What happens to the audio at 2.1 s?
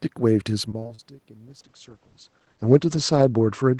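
At 2.1 s the audio is inside a call bitrate drop that runs from 1.48 s to the end. The encoder falls from 32 to 10 kbps and the band narrows from 20 kHz to 8 kHz, so the speech turns muffled and watery. On a spectrogram, content above 8 kHz vanishes under a flat ceiling. The waveform's level shift near 2 s is the talker moving.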